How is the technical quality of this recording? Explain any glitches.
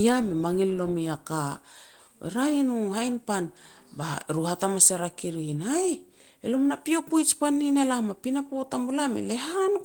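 No glitches can be heard anywhere in this speech.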